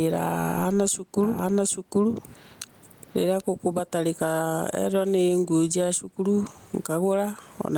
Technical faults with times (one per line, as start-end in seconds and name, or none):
0.00-7.78 gain pumping
1.23-3.41 doubled audio track